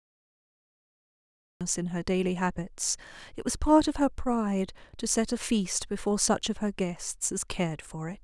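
Digital silence runs from the start to 1.61 s, where the speech jumps in mid-sound with no natural attack or fade-in. This is a cut-off start: capture or streaming began late, so the opening of the utterance was never recorded.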